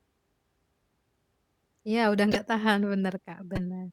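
Speech with two corrupt frames decoded, at 2.32–2.36 s and 3.55–3.61 s. Each is a brief, fairly loud chirp or blip where damaged frame data put energy at the wrong frequencies, spanning a couple of frames, then one. Unlike a dropout, it adds foreign sound rather than a gap.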